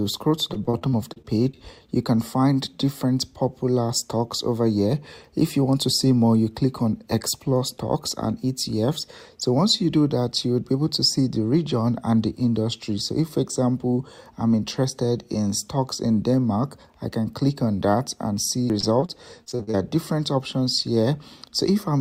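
Repeated packet loss struck twice, from 0.53 to 1.57 s and from 18.80 to 19.77 s. Late or missing data left brief holes, up to about 40 ms each, patched by extending the preceding sound. About a fifth of each stretch is filled in, making the audio choppy and robotic.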